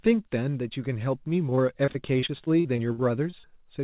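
From 1.5 to 3.49 s, repeated packet loss (robotic sound) chops up the speech. Short gaps, the longest about 52 ms, are filled by repeating earlier sound. It sounds choppy and broken.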